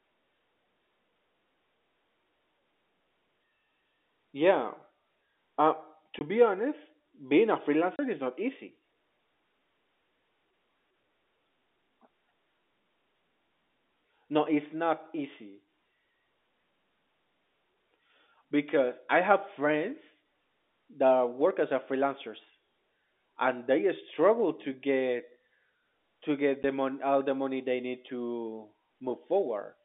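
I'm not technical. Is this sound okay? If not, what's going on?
No. There's packet loss filled with silence: brief holes at 6.19–6.21 s before "be honest", 7.96–7.99 s before "is not easy", and 26.63 s after "to get".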